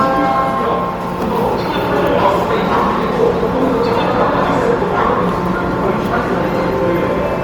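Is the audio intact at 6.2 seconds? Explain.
No, at 6.2 s the sound is grainy and rough throughout, without MP3-style swirling holes, with content up to 20.1 kHz: likely Opus compression in CELT mode, noise-filling starved bands at roughly 24 kbps.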